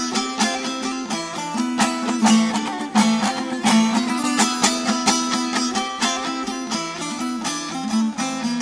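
No technical faults can be heard anywhere in the recording, and the signal stays intact and continuous throughout.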